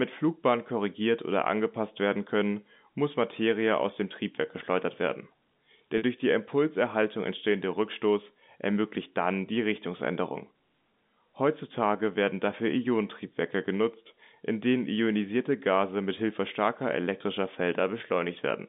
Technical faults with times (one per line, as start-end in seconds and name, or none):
5.98-6.02 packet loss with pitch repetition